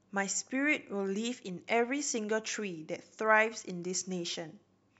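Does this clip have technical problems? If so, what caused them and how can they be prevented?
No, this clip has no technical problems, so there is nothing to trace to a cause or prevent.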